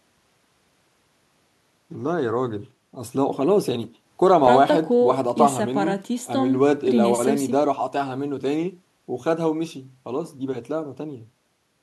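Nothing wrong can be heard in this speech recording.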